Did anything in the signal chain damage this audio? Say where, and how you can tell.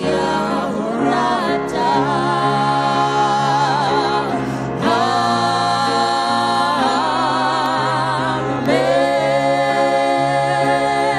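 Yes, at the driver or USB stage. From about 6.66 s to 10.66 s there's a tick once a second, roughly five in all, each a tiny gap of well under a millisecond dropped to silence. That steady one-second spacing is the giveaway for periodic USB or driver dropouts: something in the background stalls the bus or audio driver on a fixed schedule, and each stall leaves a short hole in the stream that you hear as a click against the sound.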